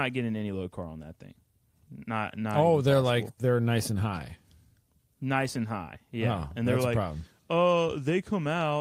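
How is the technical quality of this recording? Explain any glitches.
The speech recording has no audible technical glitches: no dropouts, interruptions or other defects in the signal.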